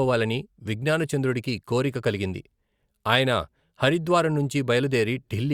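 Nothing stood out on listening to the speech in this recording.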